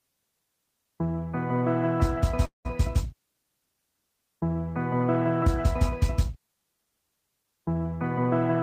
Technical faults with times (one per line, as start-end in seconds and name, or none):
2.45-2.67 call audio freeze